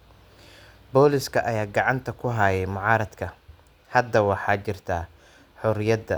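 No technical fault can be heard anywhere in the recording, which carries the speech without any audible disruption to the signal.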